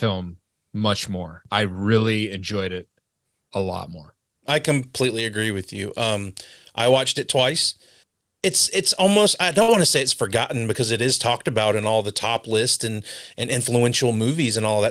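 At 9.62 s, just after "it's almost I", a burst of packet loss interrupts the speech until 9.70 s. A short run of packets never arrived in time, so the receiver stretched the last received sound across the gap, fading it as it went, for about 57 ms. When audio resumes on "want to say it's", roughly 60 ms of speech is simply gone, heard as a brief smeared tail followed by a small jump forward.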